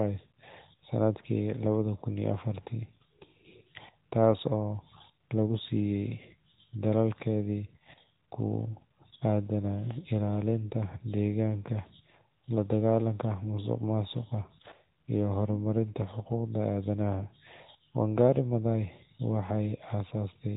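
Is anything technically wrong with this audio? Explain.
Yes. Throughout the speech, the audio went through the AMR narrowband mobile codec, which rebuilds the voice from a vocal-tract model driven by sparse pulses. Nothing passes above 3.8 kHz, so it sounds muffled and boxy, with a plainly audible buzzy, synthetic edge that fits a mid-rate mode near 10.2 kbps.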